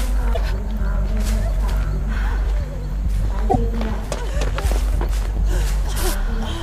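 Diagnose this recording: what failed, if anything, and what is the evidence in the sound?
The MP3 decoding stage likely failed through a broken bit reservoir: frames were lost, and the next frames reached back for borrowed data that wasn't there. The sound skips ahead at 0.33–0.37 s and 3.49–3.56 s, spanning roughly two to three 26.1 ms frames.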